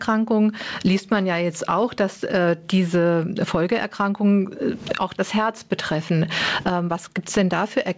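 Gain pumping runs throughout the speech, with the gain ducking by around 25 dB under loud syllables, likely from excessive input gain hitting a fast limiter. The sound is band-limited at 8 kHz, which fits a G.722 call codec at 64 kbps.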